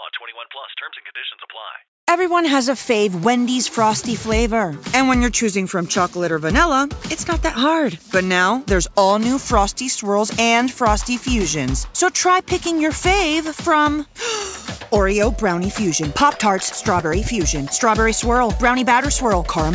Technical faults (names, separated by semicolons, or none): none